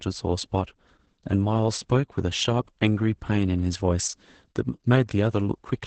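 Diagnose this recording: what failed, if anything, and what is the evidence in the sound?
The failure is at the codec stage: Opus voice compression running in its SILK linear-prediction mode degrades the speech for the whole clip. The voice sounds muffled, hoarse and slightly robotic, with coarse, buzzy texture where the excitation has been coded too cheaply, which fits a starved bitrate around 10 kbps. On a spectrogram, energy stops at a flat ceiling near 8.6 kHz (wideband), and harmonics look smeared and grainy, consistent with coarse excitation coding in 20 ms frames.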